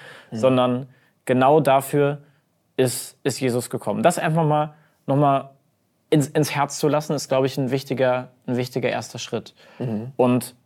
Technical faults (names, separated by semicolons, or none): none